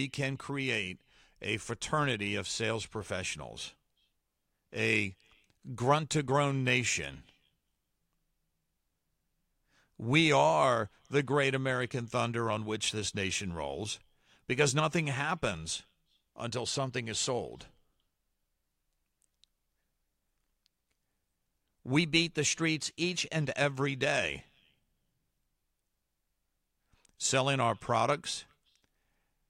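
Speech, with a drift correction step from 21.99 to 23.41 s: speed and pitch jump together, by 5.2% and 88.5 cents, then snap back abruptly, unlike gradual tape wow. The cause is likely a clock-matching resampler rebalancing its buffer.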